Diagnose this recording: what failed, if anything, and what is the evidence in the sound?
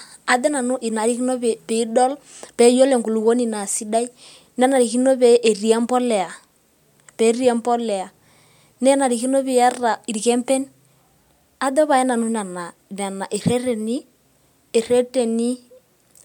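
Nothing in this speech recording points to a failure at any stage of the chain. Listening closely from the first sound to the last turns up no event that would need a diagnosis.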